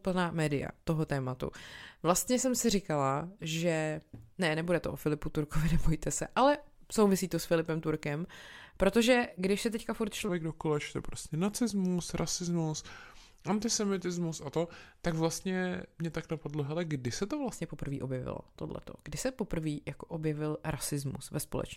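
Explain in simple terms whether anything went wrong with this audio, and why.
A section at the wrong speed runs from 10.29 to 17.53 seconds. There the audio plays at 0.85 times its proper speed, so it drags and drops roughly three semitones lower. This is likely from a player or editor running that stretch on the wrong clock.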